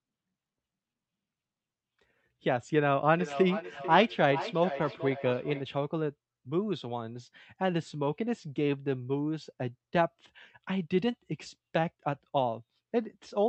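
From 3.19 to 5.7 s, feedback echo between two devices sends speech back roughly every 0.4 s, about 9 dB down, sounding thinner and ringing as it loops through another device.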